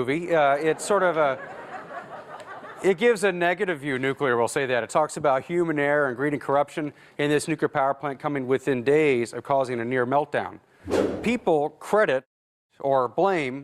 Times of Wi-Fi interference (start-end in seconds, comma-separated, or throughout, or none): none